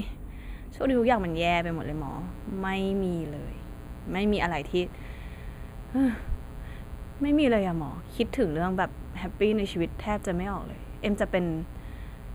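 From the start the speech has channel delay (comb filtering): one channel lags by a fraction of a millisecond, so the mono sum carves evenly spaced notches from about 5 kHz, visible as dark horizontal bands on a spectrogram.

From 0.87 s to the end, a steady, raspy 60 Hz mains buzz sits about 15 dB below the speech, drawn as a comb of stacked harmonic lines reaching several kilohertz.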